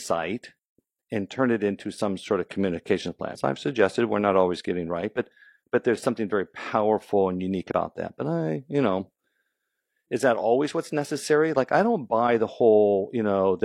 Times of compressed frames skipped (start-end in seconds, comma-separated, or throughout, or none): 3.30-3.40, 7.67-7.71